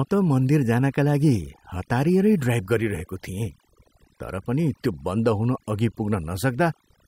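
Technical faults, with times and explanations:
Throughout, overdone noise removal: noise reduction set too strong mutes frequency bands near the noise floor, taking quiet parts of the voice with them and leaving a background of twinkling, warbling specks.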